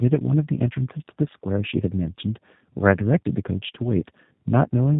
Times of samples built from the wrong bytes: none

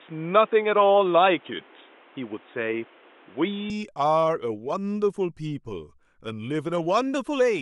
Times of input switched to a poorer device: 0.00-3.70

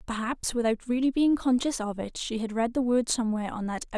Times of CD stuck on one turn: none

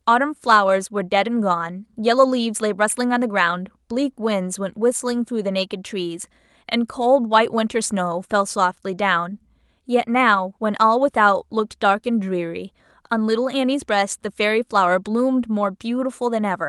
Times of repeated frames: none

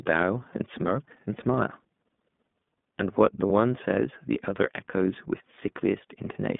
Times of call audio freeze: none

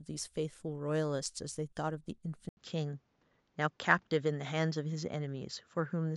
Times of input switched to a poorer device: 2.49-6.16

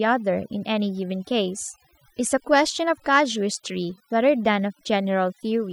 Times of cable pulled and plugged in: none

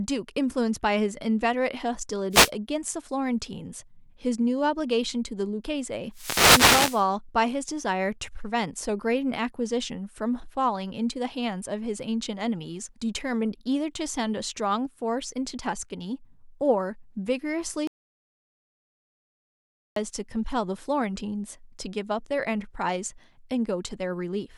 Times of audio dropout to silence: 17.87-19.96

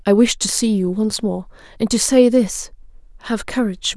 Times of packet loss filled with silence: none

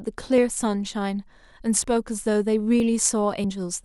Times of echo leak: none

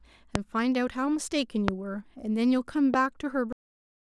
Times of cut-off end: 3.52-4.08

